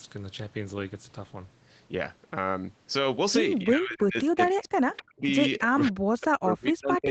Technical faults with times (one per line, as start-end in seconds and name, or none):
3.63-5.23 speech suppressed in double talk
5.58-7.10 speech suppressed in double talk